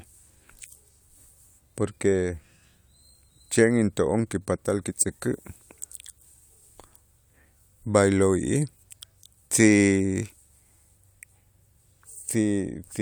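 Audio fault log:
Nothing in this speech recording stood out as a fault on listening.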